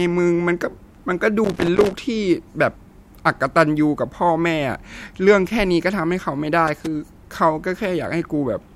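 At 1.44 s the speech breaks into loose connector crackle lasting about half a second, to 1.93 s. A worn contact is making and breaking, chopping the signal into irregular scratchy bursts. It returns briefly from 6.67 to 6.86 s.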